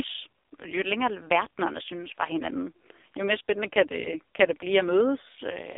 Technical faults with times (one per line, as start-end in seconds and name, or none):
0.00-5.78 AMR narrowband mobile codec